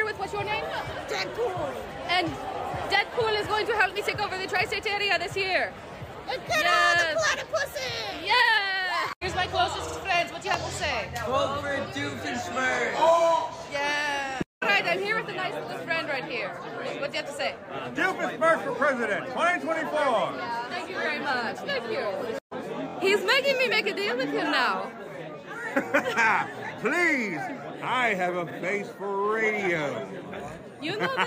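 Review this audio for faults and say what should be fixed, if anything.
Repeated frames cause stutters at 9.87 s, 22.87 s and 28.49 s. A short block of compressed audio plays again. The 46 ms block repeats twice, then a 23 ms block three times, then 46 ms once. Check frame sequence numbers when writing or sending the stream.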